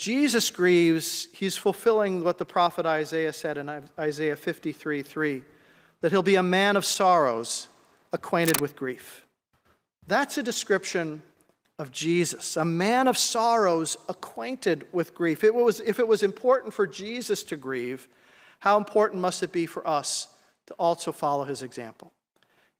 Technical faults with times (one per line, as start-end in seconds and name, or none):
8.43-8.61 cable scratch noise